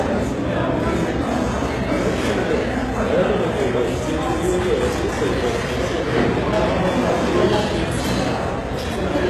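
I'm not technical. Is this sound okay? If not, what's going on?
No. From start to finish the top end sounds gritty and metallic, like a fake shimmer pasted onto the sound, and nothing at all comes through above about 12.3 kHz. This is most likely heavy HE-AAC compression. That kind of encoder keeps only the lower part of the sound properly and invents the treble by copying lower sounds upward. The copied treble doesn't quite match the real sound, which is what makes it ring falsely.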